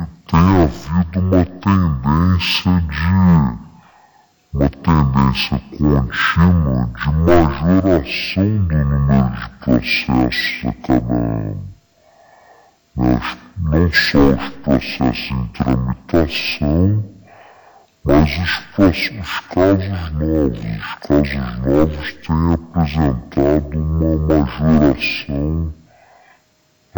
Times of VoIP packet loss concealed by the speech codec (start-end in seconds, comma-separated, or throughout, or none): none